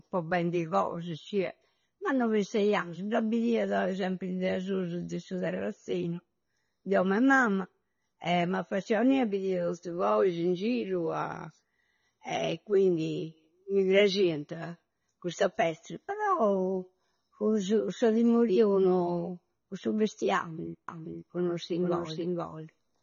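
Throughout, the speech has plainly audible AAC compression, likely from a low-bitrate AAC-LC encode near 24 kbps; nothing remains above 6.9 kHz, and smeared texture separates it from simple filtering. From 20.88 s to the end, a doubled audio track appears: an equally loud copy trails about half a second behind, with no decaying tail that would suggest echo.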